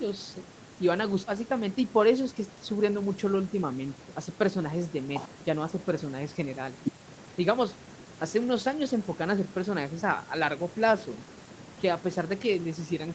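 Nothing goes wrong anywhere in this speech, which comes through an ordinary call setup with the usual microphone processing and codec path, so it tops out around 8 kHz, just as you'd expect from a call.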